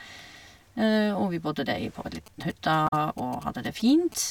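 A nearby 2G phone starts signalling at 2.26 s, just after "der i på en", and its radio bursts are rectified by the audio circuit. Until 4.14 s, GSM signalling bursts gallop underneath the speech as a dit-dit-dit of short 217 Hz buzzes, around 20 dB below the speech.

From 2.85 to 2.93 s, damaged data in the compressed stream makes the decoder misread its frames and lose sync while it searches for the next valid header. For those 88 ms the speech is disrupted.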